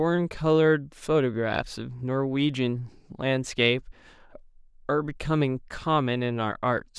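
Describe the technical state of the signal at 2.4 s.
At 2.4 s the speech signal is intact, with no dropout, clipping, distortion or other fault audible at that point.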